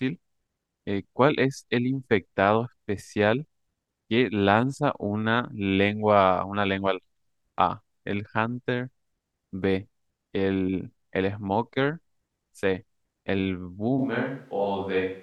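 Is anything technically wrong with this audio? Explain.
Yes. At 13.99 s the speech suddenly changes character through to the end of the clip, which fits a switch to a distant microphone, likely because the close microphone's feed dropped out and a farther one took over. The voice turns roomy and hollow and loses low end, while its level stays about the same. A faint room noise sits roughly 35 dB below the speech. On a spectrogram, the bass band thins abruptly at that point and reverberant smearing fills the gaps between syllables. The waveform envelope loses its sharp decays.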